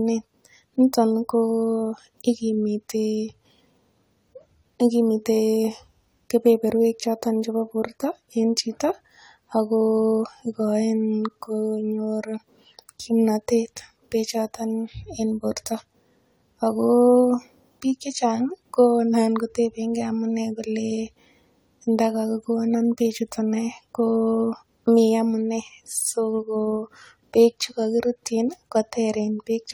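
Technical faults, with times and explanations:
Throughout: generation loss. The speech has a swirly, smeared, hollow character and softened consonant onsets, more degradation than a single pass at a bitrate in the region of 64 kbit/s AAC-LC would leave, even though content reaches up to 20.1 kHz. The likely cause is repeated decoding and re-encoding, around three passes, each quantising on a shifted frame grid, so coding noise and spectral holes accumulate and transients blur.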